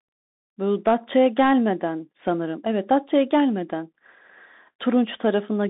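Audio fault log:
Throughout: Bluetooth CVSD headset codec. The speech is squeezed into a narrow phone-style band of roughly 200 Hz to 3.7 kHz with nothing above 3.8 kHz, so it sounds boxy and dull. The one-bit up/down coding, consistent with a 64 kbps stream, can't keep pace with sharp high energy, leaving scratchy sibilants and a grainy hiss underneath.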